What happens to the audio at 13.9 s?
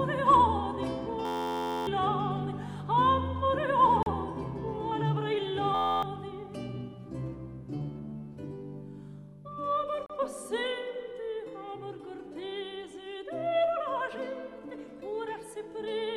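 Nothing goes wrong at 13.9 s; the audio plays through that moment intact, with no fault.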